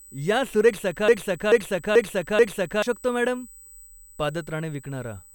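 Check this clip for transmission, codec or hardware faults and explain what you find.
Two faults are present: a USB whine throughout, and a broken-record loop early in the clip.

USB whine: Current drawn by the USB bus in 125-microsecond microframes is leaking into the audio path through the power or ground wiring. The result is a fixed-pitch tone at 8 kHz running under the speech for the whole clip, sitting about 25 dB below the signal. It comes across as a thin, steady high whistle that does not follow the speech.

Broken-record loop: From 1.08 s to 2.83 s, the player, encoder or stream most likely stalled and kept resending the last fragment it held. A 435 ms piece of speech repeats four times, back to back and identical each time, producing a stuttering, stuck-needle effect. The speech that should have played during those 1.7 seconds is missing.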